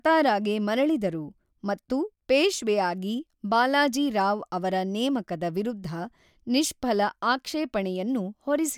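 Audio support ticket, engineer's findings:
No faults found on review.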